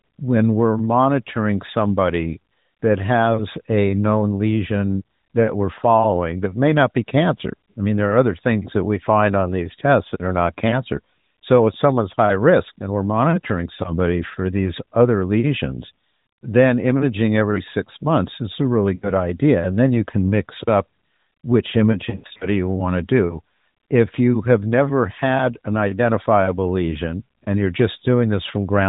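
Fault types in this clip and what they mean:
Lost AMR speech frames: The narrowband phone codec failed to get usable frames through, so the decoder papered over each gap by replaying its last good pitch and vocal tract settings at falling level. After "months is a really" a 60 ms hole around 18.96 to 19.12 s gives a quick dip and warble. From 21.92 to 22.47 s, between "can mix up which" and "you want to do", 180 ms of dropouts scatter across roughly half a second, the longest stretch 80 ms, so the sound smears and stutters.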